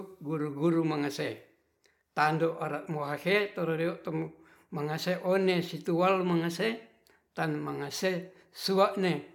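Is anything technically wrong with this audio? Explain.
No, nothing technically wrong can be heard here.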